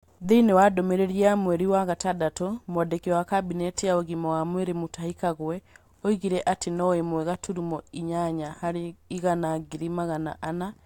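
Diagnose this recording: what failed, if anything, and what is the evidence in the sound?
Nothing in this speech recording points to a failure at any stage of the chain. No event in it calls for a diagnosis.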